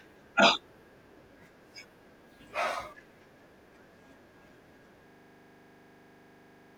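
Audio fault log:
5.08–6.76 s, system hang loop: a 40 ms slice of speech repeats exactly 42 times, giving a rigid 25 Hz buzz in place of roughly a second and a half of audio. Unlike random dropouts or codec glitches, every cycle is identical, as frozen playback recycles one ring buffer.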